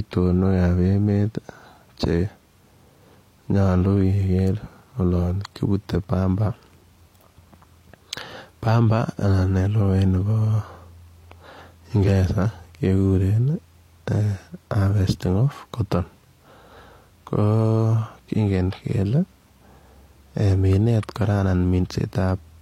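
At 12.03 to 12.09 s, the speech is interrupted by a brief burst typical of damaged data in a compressed stream. Corrupted bytes in the encoded frames cause the decoder to misread them and lose sync, producing a short chirp or squawk lasting about 60 ms.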